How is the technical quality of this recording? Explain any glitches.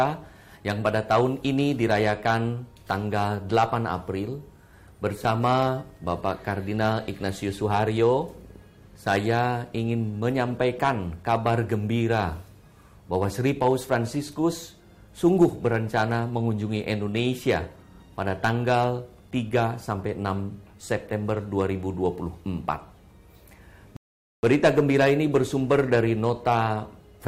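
Two glitches stand out: a very brief dropout early on and a longer pause near the end.

A block of digital silence occurs at 5.25 s. For 2.67 ms the sound falls to silence, which fits one unfilled 128-sample output buffer. The sound drops straight to silence and straight back without any fade, so the hard edges come across as a tick or dip.

A rebuffering stall runs from 23.97 to 24.43 s. The player ran out of downloaded audio and waited for more, inserting about 465 ms of silence. The sound then resumes exactly where it stopped, so nothing is lost, but playback is delayed.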